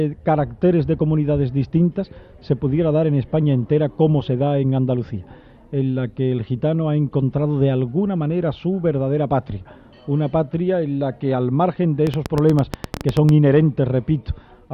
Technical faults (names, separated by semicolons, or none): train of clicks